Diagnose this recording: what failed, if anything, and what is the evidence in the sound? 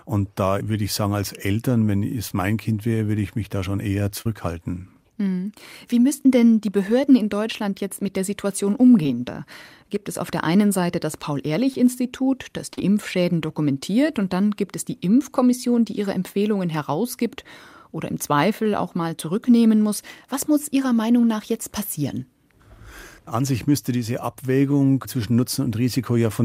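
The failure is in the network path: short concealed packet loss at five points. Brief smears or wobbles occur at 2.28 to 2.31 s, at 4.21 to 4.26 s just after "mich da schon eher", at 9.03 to 9.06 s, at 11.74 s, and at 12.73 to 12.78 s. Each gap lasts between 10 and 40 ms. The receiver's decoder bridged each gap by extending the preceding sound, then crossfaded back into the real audio.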